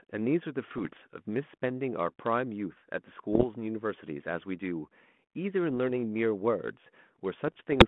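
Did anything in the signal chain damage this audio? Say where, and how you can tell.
Yes, at the transmission link: bit errors on an ADPCM link, heard as pops and rough, level-jumping bursts at 0.70–1.02 s, 3.33–3.45 s, 5.75–5.78 s and 7.48 s to the end. Each flipped bit throws off the decoder's step size and predictor, so the damage rings on briefly.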